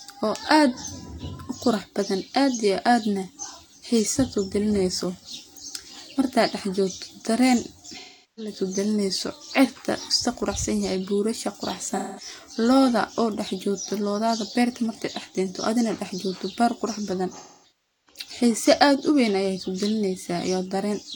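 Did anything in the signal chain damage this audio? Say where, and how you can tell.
Yes. AAC frame loss with concealment, in the codec stage, at 7.97–8.53 s, 11.89–12.28 s and 17.37–18.21 s. The decoder rebuilds missing frames from the last good spectrum, so the speech turns smeared and phasey. The final patch is broken up, its longest run around 0.4 s.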